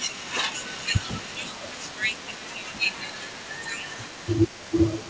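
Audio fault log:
throughout, echo leak: a very faint copy of the speech trails 203 ms behind, likely leftover loudspeaker pickup; the spectrogram shows weak duplicate harmonics offset rightward.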